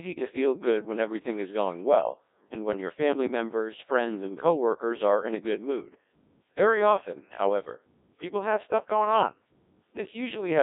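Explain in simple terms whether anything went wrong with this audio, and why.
Codec 2 vocoder affects the whole clip. The speech was squeezed into a tiny stream carrying only pitch, loudness and the rough shape of the sound, then rebuilt from pure tones. It sounds robotic and buzzy, muffled above about 3.8 kHz, and heavily damaged.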